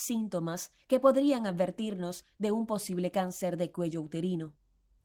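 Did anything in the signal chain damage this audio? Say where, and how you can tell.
No, nothing in this speech recording stood out as damage from any stage of the signal chain on listening.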